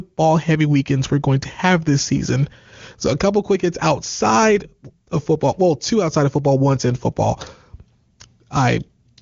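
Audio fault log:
Nothing stood out on listening to this speech.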